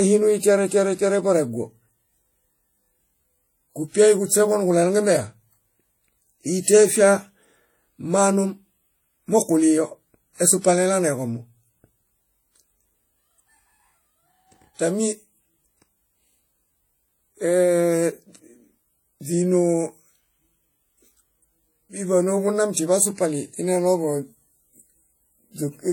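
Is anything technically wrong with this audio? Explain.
Yes. Transcoding between lossy codecs runs throughout. The second codec spends bits re-coding the first one's artefacts, so the speech carries two mismatched sets of artefacts with nothing above 18.4 kHz. The likely chain is HE-AAC followed by WMA 1.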